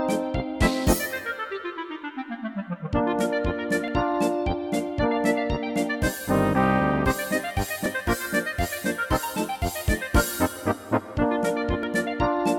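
At 3.88 s there is a tiny skip where the waveform jumps. This is an overlap between stream segments. Two segments carried time stamps that overlapped, and the player cut the overlap away, so a few milliseconds of sound vanished. The same skip returns at 7.86 s and again at 11.83 to 11.85 s. The spacing is close to 4 s each time, which fits a 4-second segment length.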